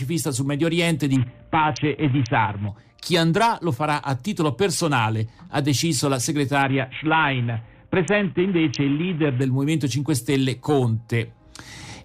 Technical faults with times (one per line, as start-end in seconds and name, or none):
1.16-2.68 Bluetooth SBC bit pool drop
6.62-9.41 Bluetooth SBC bit pool drop